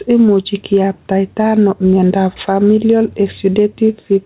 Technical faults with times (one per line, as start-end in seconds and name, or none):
0.00-4.26 gain pumping